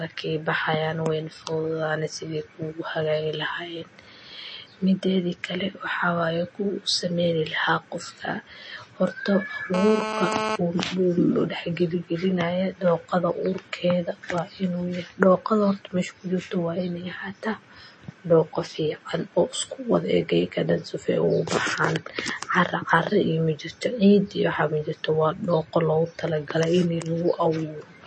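MP3 compression damage runs through the whole recording, from start to end. The speech sounds watery and swirly, and nothing is heard above about 8.3 kHz, so the top of the spectrum is cut cleanly away. The likely cause is lossy coding at a very low bitrate, which fits roughly 32 kbps: with too few bits, the encoder drops weak frequency components that then flicker on and off from frame to frame, and it discards the treble outright. The damage is plainly audible.

GSM phone buzz appears from 9.74 s to 10.56 s, about 0.8 s in all. A hard, raspy buzz sits at about 217 Hz, with a dense stack of harmonics above it, and is unrelated to the speech underneath. It comes from a nearby 2G handset on a call, transmitting in bursts 217 times a second. The audio circuitry rectifies those radio pulses into sound. Because the phone is in a call, the buzz holds nearly steady while it lasts, at about 5 dB below the speech. 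Low room noise, about 35 dB under the speech, is part of the recording itself.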